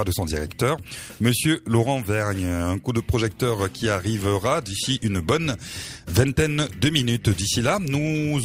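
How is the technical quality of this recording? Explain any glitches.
No glitches here: nothing in the recording points to a technical fault that needs explaining.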